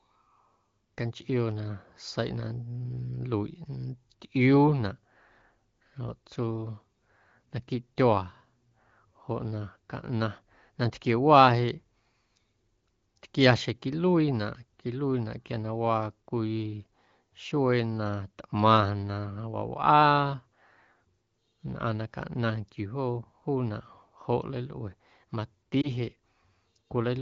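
At 25.81 to 25.88 s there is a lost AMR speech frame. A radio error left one 20 ms frame failing its checksum, so the decoder never got it. It filled the gap by repeating the previous frame's pitch and vocal tract settings at lower gain. The result is a brief dip or warble. The wideband coding around it is clear, as fits a rate near 15.85 kbit/s.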